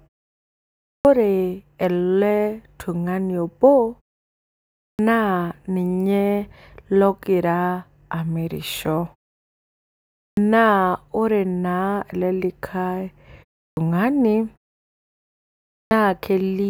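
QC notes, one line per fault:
0.92, 4.88, 10.25, 13.66 and 15.78 s: clipped start after a pause. Each time speech resumes after a gap of 0.3 to 1.29 s, the first 110 to 130 ms are missing, so the onsets begin abruptly without their opening sounds. The output path seems to drop into a low-power state during the quiet and has to wake or re-lock before it passes audio again. On the waveform, flat silence jumps straight to full-amplitude speech with no rising edge. On the spectrogram, energy appears as a hard vertical wall with no onset or lead-in consonant.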